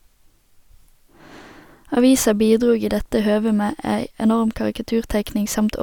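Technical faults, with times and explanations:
2.33–5.83 s: periodic clock jitter near 100 Hz adds sidebands around each speech harmonic, giving a metallic roughness; the spectrogram shows flanking copies, strongest higher up.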